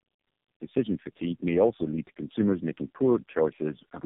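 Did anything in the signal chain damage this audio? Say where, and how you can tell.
Yes. The damage is in the codec stage and lasts the whole clip: this is tandem speech coding. The speech passed through three low-rate speech coders in a row, consistent with G.729A twice and then AMR-NB at around 5.9 kbit/s, with G.711 links between them. Each coder re-encoded the previous one's errors, so the speech sounds rough, muffled and warbly. Nothing remains above 3.7 kHz.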